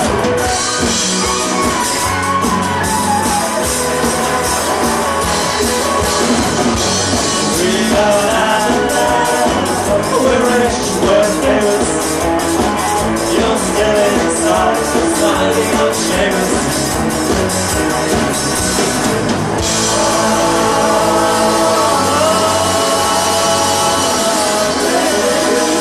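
Nothing stood out on listening to this recording.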